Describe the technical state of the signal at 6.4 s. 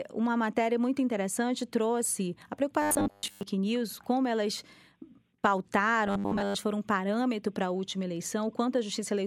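Robotic sound from repeated short buffers, 6.08 to 6.56 s, before "foram parâmetro para a": a rigid metallic 100 Hz buzz, likely a 10 ms buffer replayed through most of it.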